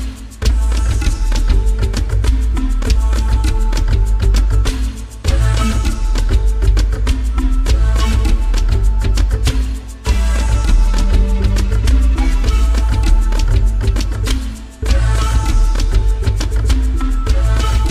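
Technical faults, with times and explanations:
No technical fault can be heard anywhere in the signal.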